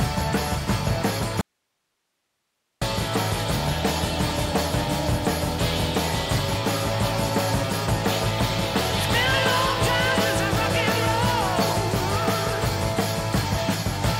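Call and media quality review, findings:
Audio dropout to a faint residue, 1.41 to 2.82 s: signal lost for about 1.4 s, abrupt cut and return, gap holds only hiss roughly 55 dB below normal level. Path stayed live; likely upstream source or capture interruption, not muting.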